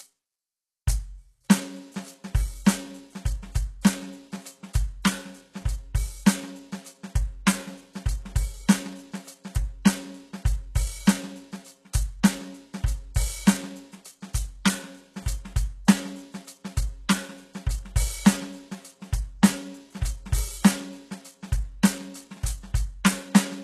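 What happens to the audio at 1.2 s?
At 1.2 s the music carries HE-AAC compression damage, and it runs through the whole clip rather than starting there. Nothing reaches above about 12.3 kHz, and the treble below that sounds bright yet gritty and metallic, likely because the upper band is being rebuilt from copied lower bands at a very low bitrate, around 16 kbps. A plain low-pass filter would make the top dull. Here the highs remain present but synthetic, their harmonics misaligned with the band below.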